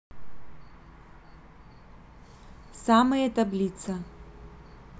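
No technical faults are audible at any point.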